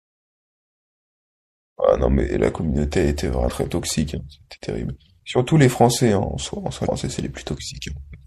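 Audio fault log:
Throughout: MP3 compression, likely the cause of the plainly audible damage. Weak frequency detail flickers in and out from frame to frame, giving the speech a watery, swirly edge with metallic chirps on s sounds and softened consonant attacks. The sound points to a low bitrate around 64 kbps. Unlike a simple low-pass filter, the loss shifts moment to moment rather than staying steady.
3.47 s to 3.51 s and 6.83 s to 6.87 s: damaged data in a compressed stream. Each lasts about 40 ms and comes through as a brief glitch. Corrupted bytes make the decoder misread the frames there, lose its place and hunt for the next valid header. Unlike the steady compression smear, these are isolated, abrupt breaks at two moments only.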